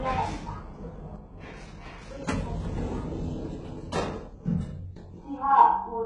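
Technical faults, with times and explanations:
throughout: HE-AAC compression. The treble sounds synthetic and gritty, with nothing above 11 kHz and heavy codec damage, which points to a very low bitrate near 12 kbps. The likely cause is spectral band replication copying lower bands upward, so the rebuilt harmonics don't align.
1.16 to 6.05 s: one channel drops out. At 1.16 s the sound falls abruptly by about 6 dB and stays lower to the end. The likely cause is one stereo channel going silent, so the mono sum keeps only half of the shared content.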